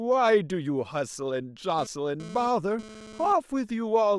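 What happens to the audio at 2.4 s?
GSM phone buzz covers 2.4 s, running from 1.78 s to 3.33 s. A nearby 2G phone is transmitting in bursts about 217 times a second, and the audio circuitry rectifies those radio pulses, so the sound picks up a hard, raspy 217 Hz buzz rich in harmonics that bears no relation to the speech. It sits about 17 dB below the speech and comes and goes in the way a phone's data transfer does, rather than holding steady.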